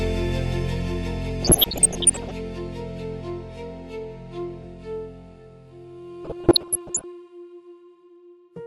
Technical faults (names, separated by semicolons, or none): MP2 compression; DAB burbling